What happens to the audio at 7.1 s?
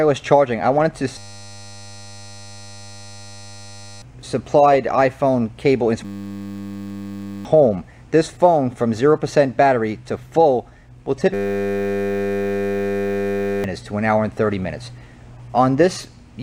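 At 7.1 s the audio is caught in a system hang loop, from 6.05 to 7.45 s. A 10 ms piece repeats, producing a steady 100 Hz buzz.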